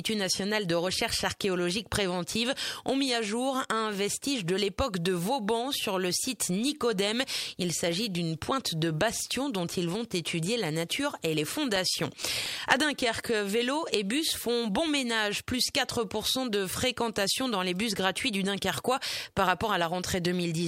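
CD scratch ticks appear from 11.53 to 12.92 s: seven short ticks, roughly five a second, the longest only a few milliseconds. A blemish on the disc ruined more data than error correction could rebuild, once per rotation, so the player patched or muted those samples.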